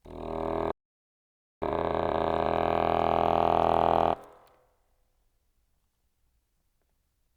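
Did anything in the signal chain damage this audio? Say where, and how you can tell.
Yes, the damage sits at the playback stage. A playback stall cuts the music off at 0.71 s and leaves dead silence until 1.62 s, about 0.91 s. The player was likely starved of data or had its output thread blocked, so nothing reached the converter. Unlike a network dropout that discards audio, the music resumes at exactly the point where it stopped rather than jumping ahead. That continuity is why the gap reads as a pause, not a loss.

Right after resuming, from 1.62 to 2.52 s, comes time-compressed catch-up. The player is working off the backlog built up during the stall by cutting short slices out and cross-fading the joins, so the music runs at 2.0 times its normal speed. The pitch stays where it belongs, and that separates it from a sample-rate mismatch, where the sound would be both faster and higher.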